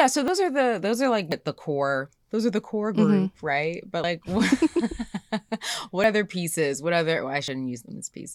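The capture side likely fell behind, a dropped buffer (overrun), letting the hardware overwrite unread samples. The speech skips ahead at 0.28, 1.32, 4.04, 6.04 and 7.48 s, losing roughly 40 ms each time, nearer 70 ms at 1.32 and 4.04 s.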